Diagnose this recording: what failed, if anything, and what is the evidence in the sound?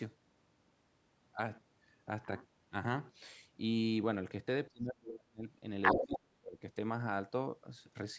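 The call's echo canceller, in the call-processing stage, likely misjudged a stretch of double talk and clamped the near-end microphone along with the loudspeaker echo. That is speech suppressed in double talk: from 4.7 to 5.45 s the talker's speech drops away for most of that span, falling by something like 35 dB at its deepest, and again from 5.94 to 6.57 s it is pulled down for about half a second.

The same stage also let the other side's voice leak through. The far-end voice plays from the talker's loudspeaker, and the echo canceller likely left part of that pickup in the microphone signal. From 5.82 to 6.19 s a second voice is audible, sitting roughly 5 dB above the talker's own level. It overlaps the second suppression dip.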